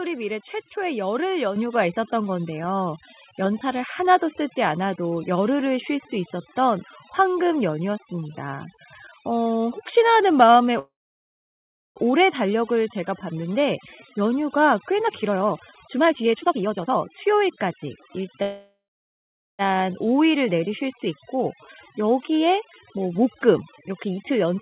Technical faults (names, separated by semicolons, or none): overdone noise removal; microphone volume stepped up; call audio freeze; jitter buffer speed-up